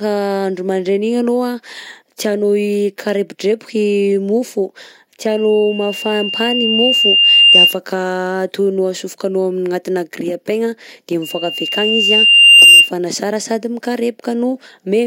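Just after "tianao hikarepodrepoka i mofo", loudspeaker feedback squeal rises at 5.30 s, lasting to 7.79 s, and returns from 11.22 to 12.92 s. The microphone re-amplifies its own loudspeaker output, so a 2.8 kHz tone swells over a second or two to well above the speech. Unlike a steady interference whistle, it grows from nothing.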